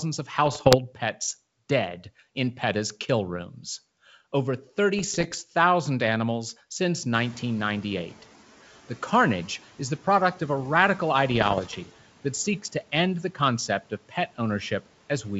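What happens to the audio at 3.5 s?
Nothing goes wrong at 3.5 s; the speech there is intact, with no dropout, click or distortion.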